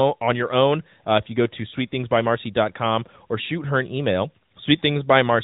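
Nothing stood out on listening to this speech, which comes through an AMR narrowband mobile codec at 12.2 kbps with its ordinary telephone-band character.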